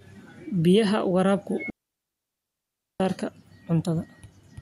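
At 1.7 s the speech drops into a clean hole of near silence until 3.0 s, with no noise burst: a digital wireless dropout, where the receiver muted for 1.3 s after losing data.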